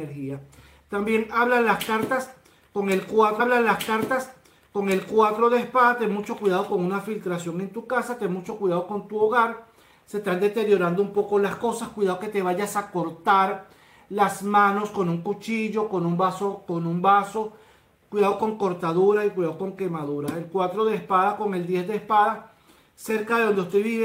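At 3.39 s the player queued the same stream segment twice, a stream segment repeated fault: about 2.0 s of sound replays up to 5.39 s, with a small blip at the jump back.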